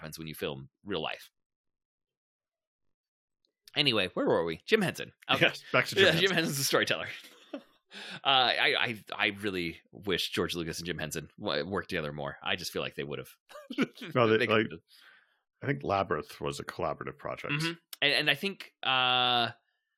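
From 1.1 to 3.55 s, a block size mismatch (padded): each block falls short of the next stage's read, which fits a 1024-sample block, and zeros fill the rest. The gaps buzz at 46.9 Hz and slow the speech to 0.938 speed, yet the timbre holds, unlike a sample-rate mismatch.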